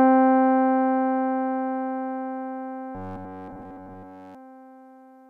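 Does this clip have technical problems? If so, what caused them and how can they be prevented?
Yes. From 2.95 s to 4.35 s the sound becomes a rigid, metallic buzz at 93.8 Hz. This is robotic sound from repeated short buffers. New audio likely arrived too seldom, so a chunk of about 10.7 ms was looped throughout that stretch while the real audio was skipped. A larger jitter buffer and steadier audio delivery would prevent it.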